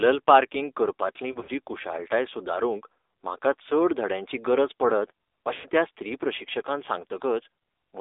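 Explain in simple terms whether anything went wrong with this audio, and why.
Yes, two things went wrong, both tied to a mobile phone call.

Throughout the clip, the speech has passed through the AMR narrowband mobile codec used for 2G and 3G calls. Everything above about 3.7 kHz and below about 300 Hz is gone, which gives the thin phone-line sound. The codec rebuilds the voice from a simple model of the throat and mouth, so the speech sounds buzzy and plainly artificial. That synthetic buzz is what sets this codec apart from a plain bandwidth limit, which would only sound muffled.

There are also lost AMR speech frames, when radio errors corrupted pieces of the call and the decoder filled the gaps by guessing. From about 1.32 to 1.51 s, the damage is spread out in short pieces, none longer than about 40 ms, which gives a brief warble and wobble. From about 5.54 to 5.66 s, roughly a tenth of a second is missing, which fits about five lost 20 ms frames in a row. 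The sound stretches out, fades, and comes back rough. Unlike a simple dropout, the gap does not go silent at once: it starts as a smeared repeat of the speech just before it.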